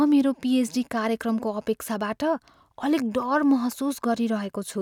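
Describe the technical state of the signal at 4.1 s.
The signal at 4.1 s is intact, with no technical fault present at that moment.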